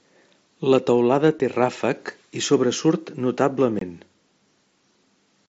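Unconcealed Bluetooth headset packet loss at 1.39 s and 3.79–3.82 s: lost voice packets leave silent gaps of 7.5 and 22.5 ms with abrupt edges.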